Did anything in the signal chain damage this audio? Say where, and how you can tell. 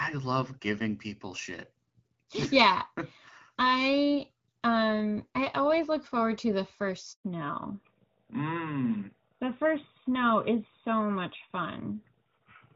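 Yes. At the network stage there is a handover gap from 7.12 to 7.24 s. The speech dies away almost at once and a silence of about 120 ms follows before sound resumes. This happens when a call is passed from one network link to another and no speech frames arrive during the switch. Nothing can be recovered for that interval, so whatever was said inside it is missing.

At the codec stage, right after the gap at 7.24 s, there is a fallback to narrowband that lasts to the end of the clip. Before 7.24 s the speech has the fuller top end of HD Voice, and its light coding texture fits wideband AMR at around 12.65 kbit/s. From 7.24 s on, nothing above 4 kHz remains, and the speech sounds duller and rougher. That fits a renegotiation onto the older narrowband AMR codec at roughly 12.2 kbit/s.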